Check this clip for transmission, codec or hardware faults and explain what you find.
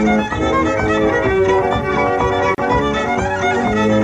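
There's one fault: a gap at a join of encoded pieces, at 2.55 s. The sound drops into a gap of about 34 ms with smeared edges, then carries on where it stopped, because separately encoded pieces were joined untrimmed, leaving encoder delay and end padding in.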